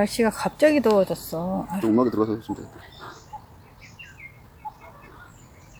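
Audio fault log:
1.74–5.79 s, time-stretched section: from 1.74 s to the end, the pace jumps to about 1.71 times the original while pitch holds, so the audio turns rushed. Likely cause is software compressing this span to fit a length, dropping short segments to preserve pitch.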